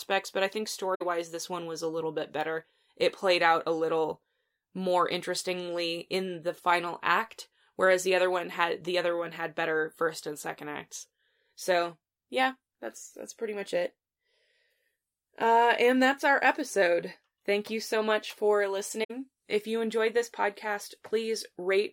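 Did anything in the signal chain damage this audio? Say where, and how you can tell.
Yes, at the codec stage: AAC frame loss with muting. The speech falls into a soft-edged gap from 0.94 to 1.02 s and from 19.03 to 19.11 s, each 64 ms, which fits three lost frames. The decoder zeroed those spectra, and overlapping windows fade the sound out and back in.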